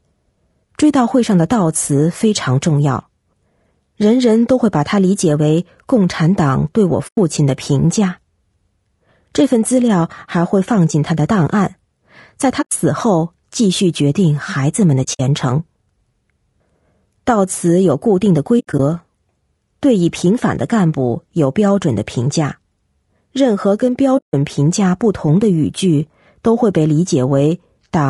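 Speech with a rough, grainy texture throughout: noise fills the gaps between the harmonics, and the top band sounds thin and synthetic. That most likely comes from low-delay AAC compression (AAC-ELD) at a rate that fits about 32 kbps. The scarce bits leave plainly audible damage. On a spectrogram, the harmonic stripes show speckled energy between them and a patchy upper band.

The speech also has AAC frame loss with muting: brief, soft-edged holes. The decoder zeroes the missing spectra, and the overlapping windows fade the sound out and back in. The holes fall at 7.07 to 7.18 s (about 100 ms), 12.61 to 12.72 s (100 ms), 15.03 to 15.20 s (100 ms of dropouts scattered over 160 ms, the longest run around 70 ms), 18.59 to 18.80 s (120 ms scattered over 200 ms, longest around 70 ms), and 24.17 to 24.34 s (160 ms). On a waveform they show as tapered gaps. On a spectrogram they show as blank vertical bands across all frequencies.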